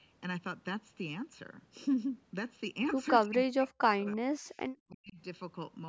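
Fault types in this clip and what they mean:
Channel delay (comb filtering): The speech sounds hollow and phasey throughout, with fixed notches starting near 700 Hz and recurring at regular intervals above it. One channel runs roughly 0.7 ms behind the other, so summing them to mono cancels shared content at those frequencies.
Speech suppressed in double talk: The speech drops sharply, by up to about 40 dB, in patches between 3.25 and 4.33 s and again from 4.88 to 5.19 s, roughly a second in all. The likely cause is an echo canceller turning down the talker while the far side spoke simultaneously.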